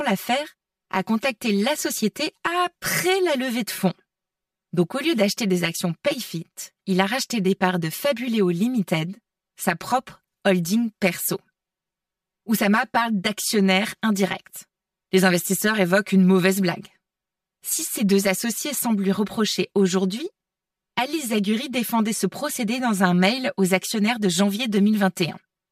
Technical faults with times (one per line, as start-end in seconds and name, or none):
0.00-25.72 channel delay (comb filtering)